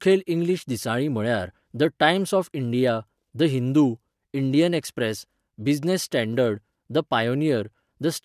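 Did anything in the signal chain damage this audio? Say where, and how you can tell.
No, nothing in this speech recording stood out on listening as damage from any stage of the signal chain.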